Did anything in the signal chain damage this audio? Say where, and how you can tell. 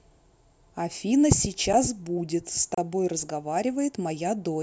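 Yes, at the driver or buffer stage. There are two blocks of digital silence: a tick at 1.73 s, and a 32 ms hole from 2.74 to 2.78 s. Each cuts out and back with no fade. The output buffer was likely not filled in time.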